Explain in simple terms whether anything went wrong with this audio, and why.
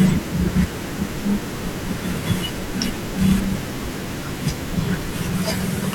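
From 3.06 to 5.07 s the speech carries small, evenly spaced ticks, about fifteen, one every 0.125 s. These are periodic USB or driver dropouts: a tiny sliver of sound is briefly replaced by silence. Unlike random crackle, the ticks keep strict rhythm and vanish during pauses.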